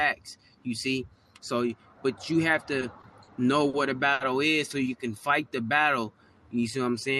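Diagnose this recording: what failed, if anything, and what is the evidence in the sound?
Short stalls from late packets occur at 2.79, 3.01, 3.23, 3.69 and 4.13 s. This is a network and jitter-buffer fault. Each time a packet arrived late, the buffer emptied, and the receiver held the last sound for 20, 20, 40, 40 and 70 ms, then resumed where it left off without losing audio.

A jitter buffer slow-down follows from 4.83 to 7.01 s. After those delays, the buffer rebuilt its reserve by repeating short pitch periods, adding about 218 ms. The sound runs at roughly 90% speed with unchanged pitch, so it is audibly drawn out through the Opus call path's 12 kHz band.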